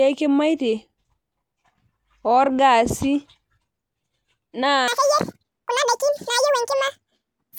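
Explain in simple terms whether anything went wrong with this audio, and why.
From 4.88 s to the end, there's a section at the wrong speed: the speech runs twice as fast and jumps roughly ten semitones higher, likely from playback on the wrong clock.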